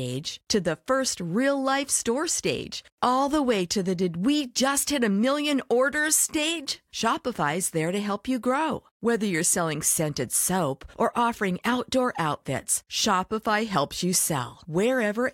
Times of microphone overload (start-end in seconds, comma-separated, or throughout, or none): none